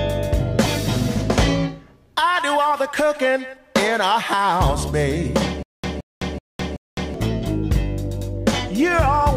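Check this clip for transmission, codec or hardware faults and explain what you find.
One fault is present. Stutter with silent gaps, 5.63 to 7.14 s: a likely stream stall repeats one 170 ms burst four times, each followed by 208 ms of digital silence.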